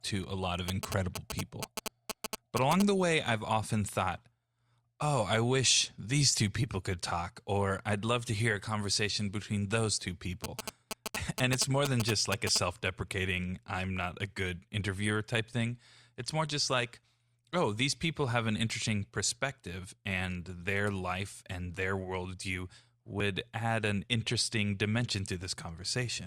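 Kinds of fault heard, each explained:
GSM signalling bursts: a nearby 2G phone sends short clusters of radio bursts while signalling to the network, and the audio circuit rectifies them into sound. They come as a galloping dit-dit-dit of brief 217 Hz buzzes, roughly as loud as the speech, from 0.68 to 2.82 s and from 10.44 to 12.58 s. A spectrogram shows grouped vertical stripes with harmonic lines stacked at 217 Hz multiples. The waveform shows square-edged bunches of spikes.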